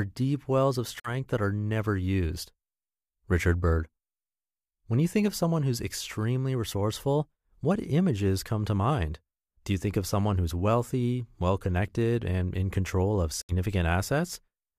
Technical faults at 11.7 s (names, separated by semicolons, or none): none